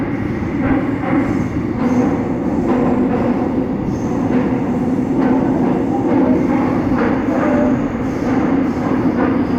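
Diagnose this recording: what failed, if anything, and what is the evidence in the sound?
The fault sits at the codec stage of a Bluetooth link: lost LE Audio frames between 0.66 and 0.73 s. About 45 ms of audio is missing, spread over 60 ms, with the longest gap around 20 ms. The LC3 decoder covers each gap by repeating the last spectrum with randomised signs, so the sound turns briefly into a noisy smear. On a spectrogram, harmonic lines blur into broadband texture. The waveform shows a few short stretches of noise-like fill.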